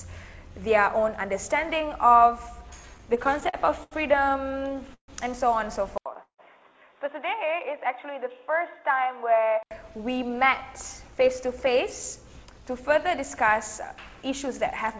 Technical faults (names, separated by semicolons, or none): repeated stalls (stutter); input switched to a poorer device; call audio freeze; jitter buffer slow-down; jitter buffer speed-up